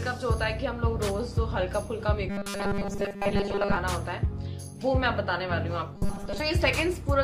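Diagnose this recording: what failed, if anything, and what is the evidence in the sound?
The fault is robotic sound from repeated short buffers, at the driver or buffer stage, from 2.30 to 3.77 s and again from 5.96 to 6.40 s. The sound collapses into a rigid metallic buzz at 200 Hz, the likely result of audio arriving too seldom so that a 5 ms chunk is looped while most of the real signal is dropped. A spectrogram shows flat horizontal harmonic lines spaced 200 Hz apart, and the waveform shows identical cycles repeating every 5 ms.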